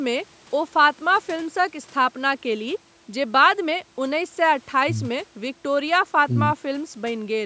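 No technical faults occur anywhere in this speech, so there is nothing to describe in time order.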